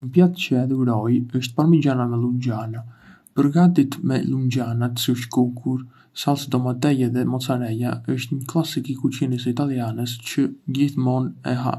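No technical faults can be heard anywhere in the recording; the signal stays continuous and steady throughout.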